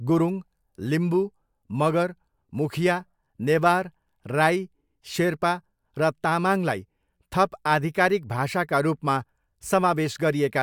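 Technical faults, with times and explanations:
Nothing technical gets in the way here, the speech comes through without any audible problems at all.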